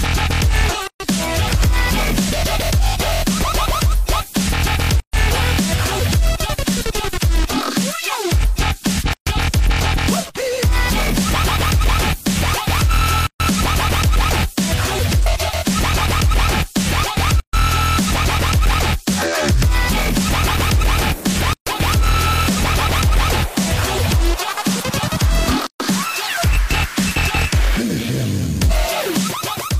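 Short silences cut into the sound at 0.87, 5.0, 9.13, 13.27, 17.4, 21.53 and 25.67 s. Each is a gap at a join of encoded pieces, after every 4 s of sound. Leftover encoder delay and final-frame padding leave holes of about 130 ms. The codec smears their edges. The sound then resumes where it stopped.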